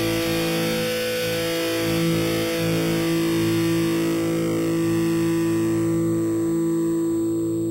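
Imaging from sample-and-hold upsampling runs through the whole clip. The rate was raised by simply repeating each sample, with no smoothing filter afterward. That leaves a mirrored copy of the spectrum above the original band. Here the first image sits between 4 and 8 kHz, which fits an original rate of 8 kHz. It lies about 16 dB below the signal. It is heard as a metallic fizz that rises and falls with the sound.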